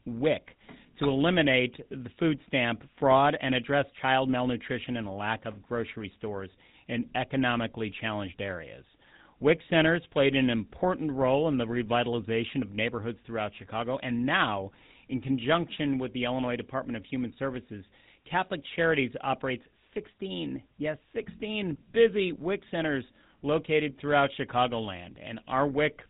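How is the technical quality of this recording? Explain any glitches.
The quality is poor: GSM full-rate codec damage runs through the whole speech recording. The codec rebuilds the voice from a vocal-tract filter driven by a coarse, thinned pulse train, at a rate that fits a 13 kbps stream, which adds a plainly audible buzzy, gravelly roughness. Nothing above 3.8 kHz survives. That grainy buzz, rather than simple muffling, distinguishes it from a plain low-pass or narrowband telephone line.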